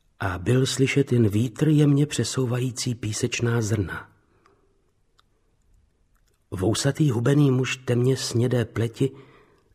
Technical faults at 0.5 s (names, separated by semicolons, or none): none